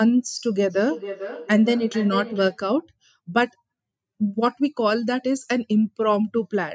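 From 0.68 to 2.64 s the speech returns at a steady interval of roughly 400 ms, at its loudest about 11 dB below the direct speech. This is feedback echo between two devices: one device on the call plays the other's microphone signal, that microphone picks it up again, and each echo canceller removes only its own playback. Room reverberation blurs sound continuously, but here the speech returns as distinct copies at a fixed spacing.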